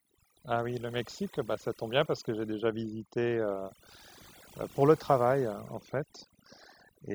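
A speech recording with noise reduction set too strong shows overdone noise removal throughout, leaving near-silent gaps full of twinkling specks.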